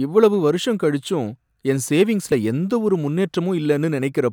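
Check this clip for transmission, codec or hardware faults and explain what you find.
One fault stands out in this speech clip. A dropped buffer (overrun) at 2.32 s, between "இவ்வளவு வருஷம் கழிச்சும் என்" and "எந்த ஒரு", is heard as a jump where the audio skips ahead with no gap. The likely cause is samples being overwritten before capture, losing roughly 40 ms.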